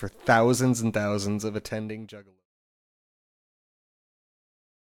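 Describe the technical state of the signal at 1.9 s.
At 1.9 s the signal is intact, the level simply easing down as part of a smooth fade-out with no click or hard edge.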